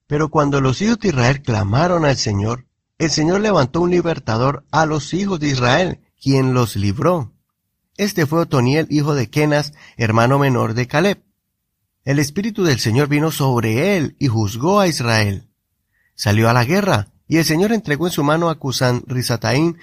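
Speech, opening on an adaptive stream starting at a low bitrate: until 6.0 s, before "quien los libró", the audio is dull with the treble missing, which suggests a low-bitrate Opus version. Quality then jumps with no gap or silence, which distinguishes it from a dropout or reconnection.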